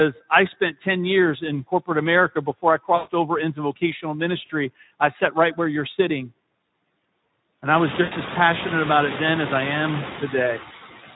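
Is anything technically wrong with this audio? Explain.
Yes, three faults affect this speech clip.

Throughout, a noise suppressor pulls down whatever bands it judges to be steady noise, by about 18 dB, frame by frame. The background drops away between phrases and swells back under speech. This is most obvious once the room noise climbs sharply at around 7.5 s.

Also throughout, the speech is coded with the Speex codec at a low setting, which fits a rate near 11 kbps. With few bits left for the excitation, the speech comes out hoarse and grainy, and any upper band is a noise-like fill rather than real detail.

There is VoIP packet loss concealed by the speech codec at three points:
from 2.95 to 3.12 s, after "before I" and before "over into vocational";
from 4.45 to 4.51 s, before "I sat right where";
from 8.01 to 8.15 s, after "I was" and before "as passionate".

Each time, the decoder fills the gap by extending its last pitch and filter while fading the gain. 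The gaps point to roughly 140 ms, 40 ms and 100 ms of lost audio. Each comes out as a fading smear, and the speech stays weak for a moment after it.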